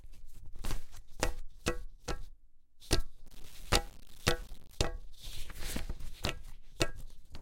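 From 3.25 to 4.75 s the sound turns grainy, with gritty distortion tracking it about 25 dB down: low bit depth without dither, likely undithered 8-bit rounding.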